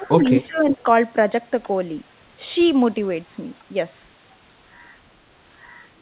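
A speech recording carried over a narrowband call path, with nothing above about 4 kHz, which fits G.711 A-law at 64 kbps. From 0.0 to 0.8 s the talker's level dips in pieces, about half a second in total, falling by around 15 dB at its deepest. This is likely speech suppressed in double talk, where the echo canceller mistook overlapping far-end activity for echo and attenuated the near talker along with it. Two brief scraps of likely echo leak overlap it, at 0.43 to 0.48 s and 0.72 to 0.83 s, each a copy delayed by 353 ms. The first sits about 35 dB below the speech, and the second, louder one about 25 dB below.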